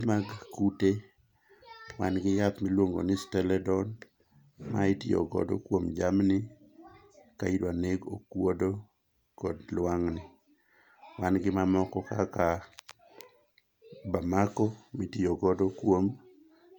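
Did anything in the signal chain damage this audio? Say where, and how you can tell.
No, nothing along the chain leaves an audible mark on this speech recording at any stage.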